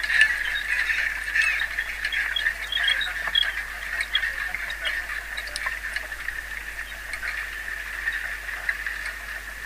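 No technical faults can be heard anywhere in this recording; the signal stays continuous and intact throughout.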